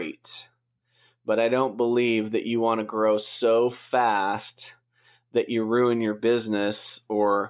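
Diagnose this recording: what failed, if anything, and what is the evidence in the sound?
Listening closely to the speech, nothing stood out as a failure at any stage of the recording chain.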